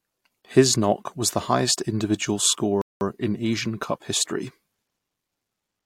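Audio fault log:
2.82–3.01 s rebuffering stall: after "was the highest individual" the speech halts for 195 ms of silence, then resumes exactly where it stopped; the player had run out of buffered data.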